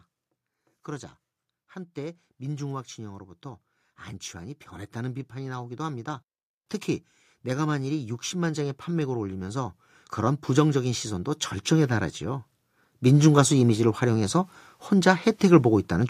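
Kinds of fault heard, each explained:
Automatic gain rising: the gain control judged the input too quiet and pushed its level up gradually, so the voice and the background swell together. Here it climbs about 4 dB from 4.35 to 6.09 s, about 9 dB from 7.47 to 12.49 s, and about 5 dB from 13.01 to 16.05 s.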